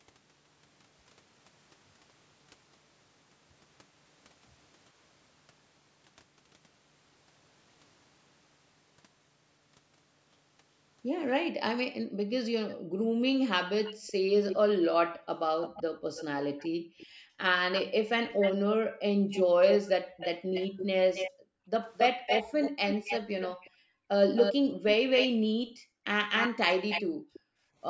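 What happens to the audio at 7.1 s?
Nothing goes wrong at 7.1 s: the speech passes through intact, with only the normal band limit of call microphone processing, which leaves nothing above 8 kHz and trims the lowest bass.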